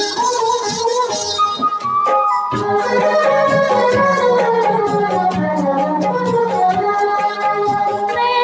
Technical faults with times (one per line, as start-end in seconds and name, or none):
0.00-8.44 noise suppressor applied to music or sounds